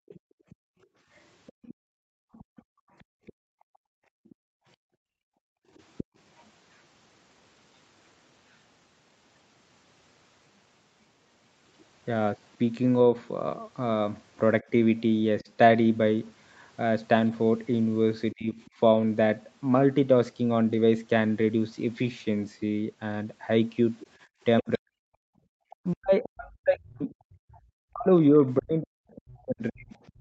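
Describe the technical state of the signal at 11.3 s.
At 11.3 s the speech is intact, with no dropout, distortion or other fault, only the normal call-path band limit that leaves nothing above about 8 kHz.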